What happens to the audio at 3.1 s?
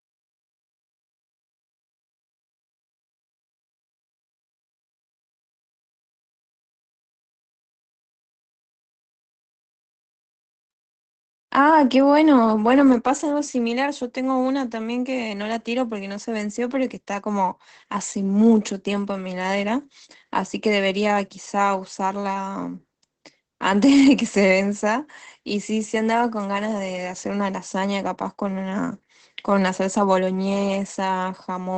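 At 3.1 s, as through the whole clip, Opus voice compression is audible: the SILK coder's coarse excitation makes the speech muffled, hoarse and faintly robotic, which fits a rate near 12 kbps. A spectrogram shows a hard ceiling with nothing above about 8.9 kHz.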